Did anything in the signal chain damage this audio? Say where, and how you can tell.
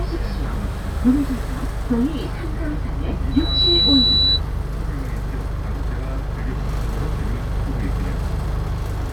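Yes, there's loudspeaker feedback squeal in the acoustic loop from 3.31 to 4.41 s: a 3.9 kHz tone swells within a fraction of a second to roughly 5 dB above everything else.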